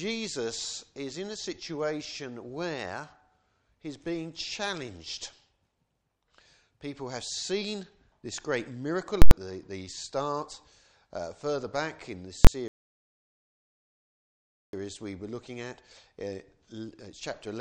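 At 9.22 to 9.31 s there's a burst of invalid numbers at full scale: a calculation blew up into infinite or invalid values, which pinned the output at the limit for about 93 ms, which fits a 4096-sample block. You hear a loud pop at each edge with nothing between. It happens again at 12.45 to 12.47 s, and this time the block is only 23 ms, which fits 1024 samples, so it lands as one sharp bang. Then at 12.68 s there's a rebuffering stall. The player ran dry, and the sound drops to silence for about 2.05 s before picking up at 14.73 s exactly where it left off. Nothing is lost, but that much time is added.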